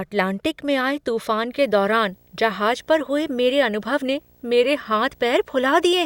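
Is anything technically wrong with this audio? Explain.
Yes. From 1.50 s to the end of the speech, video or display buzz intrudes: a display or video cable couples into the audio path, producing a rough buzz at 59.94 Hz with hash above it and a faint 15.7 kHz line tone, roughly 35 dB below the signal. On a spectrogram it forms harmonic stripes from 59.94 Hz upward plus a thin steady line at 15.7 kHz.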